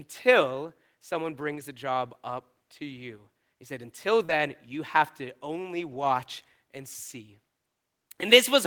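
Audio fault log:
1.51–1.61 s, 4.29–4.31 s, 5.92–6.10 s: lost packet rebuilt from error correction. Stretches of 60 ms, 20 ms and 100 ms turn briefly rough and noisy with no gap. The following packet carried a low-bitrate duplicate of the lost audio, which the decoder played in its place.
4.25–4.38 s: short concealed packet loss. About 40 ms never arrived in time, and 31 ms of it was filled by extending the preceding sound before blending back into real audio. This gives a brief smear or wobble and adds roughly 15 ms of timing drift.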